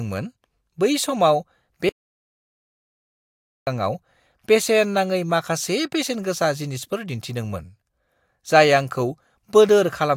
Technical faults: audio dropout to silence

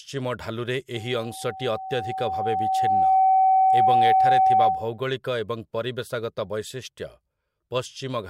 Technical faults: loudspeaker feedback squeal

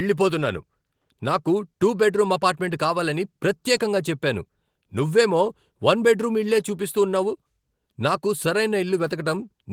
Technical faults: none

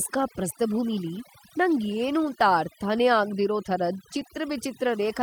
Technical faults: overdone noise removal; lost packet rebuilt from error correction

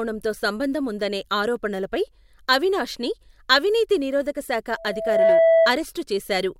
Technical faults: loudspeaker feedback squeal

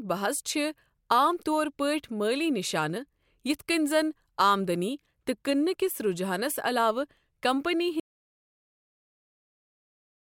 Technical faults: audio dropout to silence

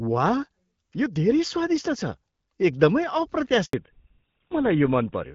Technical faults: handover gap; fallback to narrowband

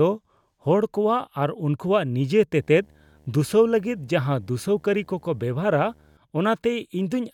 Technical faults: video or display buzz

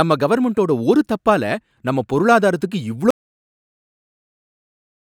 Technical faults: audio dropout to silence

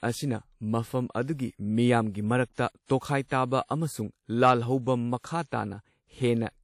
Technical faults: WMA compression

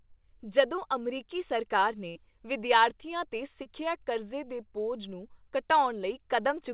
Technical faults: short concealed packet loss; burst of packet loss

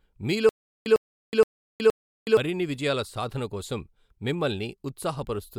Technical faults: stutter with silent gaps

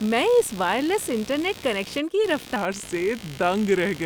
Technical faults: computer activity noise; section at the wrong speed

